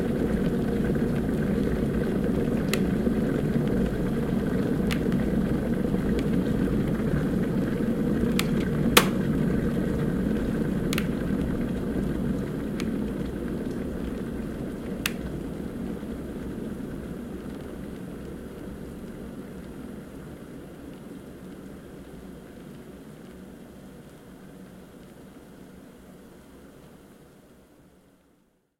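A faint, brief blip at 0.82 s in the everyday sound is a corrupt frame decoded: one damaged compressed frame, played anyway, misplaced energy across wrong frequencies.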